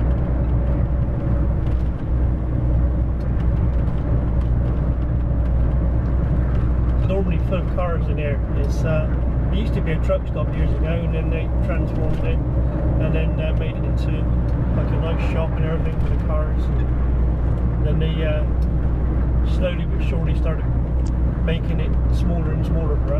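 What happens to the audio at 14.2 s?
Nothing goes wrong at 14.2 s; the audio plays through that moment intact, with no dropout, click, distortion or other fault.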